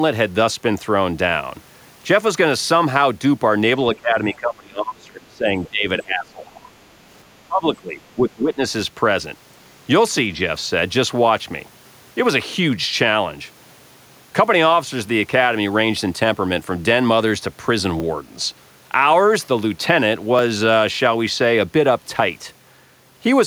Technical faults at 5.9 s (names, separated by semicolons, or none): speech suppressed in double talk